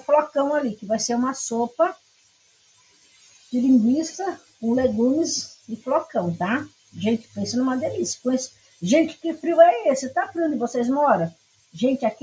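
Noise suppressor applied to music or sounds, throughout the clip: a suppressor tuned for speech stays active and treats sustained tones, ambience and decays as noise to remove. Attacks pass through, but anything held is pulled down by up to around 20 dB, so the level pumps and thins from moment to moment. The top end stops at 8 kHz, as expected from call microphone processing.

Sound cut by the noise suppressor, first from 1.69 to 3.53 s, the longest event, with about a second and a half affected and a dip of about 20 dB. Shorter cuts follow at 4.36 to 4.62 s (about 19 dB), 5.46 to 5.86 s (about 17 dB), 6.66 to 6.96 s (about 19 dB), 7.18 to 7.37 s (about 16 dB), 8.47 to 8.82 s (about 18 dB), and 11.3 to 11.8 s (about 20 dB). Each time, steady or fading material sinks.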